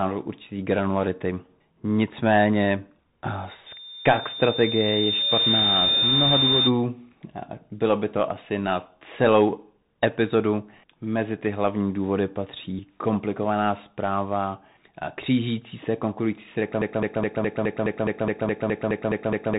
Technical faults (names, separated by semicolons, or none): Bluetooth CVSD headset codec; loudspeaker feedback squeal; broken-record loop